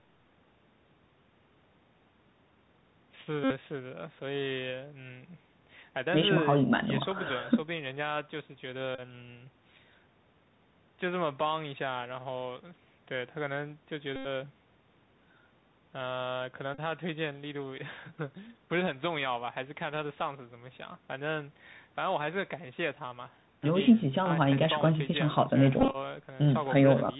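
The whole clip sits behind the Bluetooth CVSD headset codec, so nothing above 4 kHz gets through. The adaptive step can't keep up with loud, bright moments, so sibilants come out scratchy and a grainy hiss runs under the speech the entire time.

Then there are five bursts of the Bluetooth headset packet being repeated, where lost voice packets were replaced by decoding the previous one again. The first, at 3.44 to 3.52 s, lasts about 64 ms. The others come at 8.95 to 9.01 s (30 ms), 14.16 to 14.27 s (90 ms, the worst) and 16.74 to 16.79 s (about 38 ms). Each sounds like a short, steady buzz near 267 Hz, from the same 3.75 ms chunk looping. At 25.80 to 25.96 s the losses are scattered across roughly 140 ms in runs of around 20 ms at most, so it's more a stutter of brief buzzy ticks.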